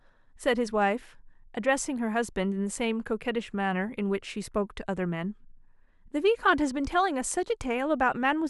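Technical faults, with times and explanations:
No technical faults can be heard in this speech recording. Nothing in it calls for a time or an explanation.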